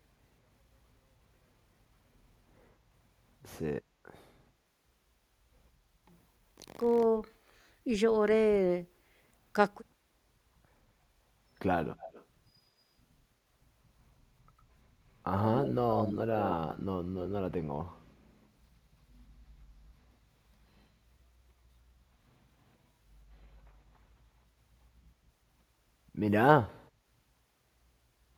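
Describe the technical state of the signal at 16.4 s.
An echo leak runs from 16.38 to 16.55 s: a delayed copy of the speech trails the original by about 103 ms, roughly 10 dB quieter. This likely comes from a far-end loudspeaker whose echo canceller let its microphone pickup return into the call.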